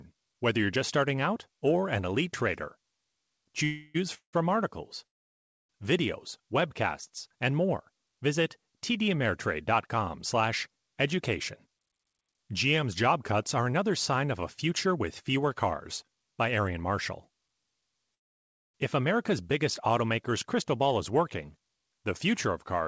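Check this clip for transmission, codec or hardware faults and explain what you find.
Two kinds of fault are present: four call audio freezes and one stretch of jitter buffer speed-up. The speech passes through a call codec whose band stops at 8 kHz, which fits G.722 at 64 kbps.

Call audio freezes occur at 3.64–3.96 s, 4.14–4.35 s, 5.07–5.71 s and 18.14–18.76 s. The likely cause is delayed packets draining the jitter buffer. The first freeze prolongs the last sound as a fading buzz, visible as smeared, static harmonics on a spectrogram. The second has about 110 ms of flat silence. The last two are almost entirely silent gaps of about 0.6 s, clean dropouts in the waveform. After each gap the speech resumes without loss, only later.

Jitter buffer speed-up runs from 11.67 to 16.78 s. The receiver trimmed repeated pitch-period slices to shed about a third of a second of backlog, so the speech plays at 106% speed with unchanged pitch and sounds slightly hurried. 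On a spectrogram, syllables appear compressed in time while harmonic spacing stays the same.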